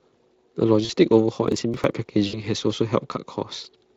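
From 0.85 to 0.91 s there is VoIP packet loss concealed by the speech codec. About 40 ms of packets never arrived, so the Speex decoder extrapolated its last pitch and filter at falling gain, and the speech smears into a short, fading buzzy tone or coloured noise.

From 1.48 to 2.07 s the processor repeatedly missed its deadlines for audio buffers of around 10 ms, skipping about ten of them outright. The resulting processor overload crackle is a burst of crackle or gritty tearing over the speech that stops once the load eases.

From 2.27 to 2.44 s a longer 60 ms loss is concealed the same way. The concealed sound lasts longer, and the voice stays weakened briefly after packets return.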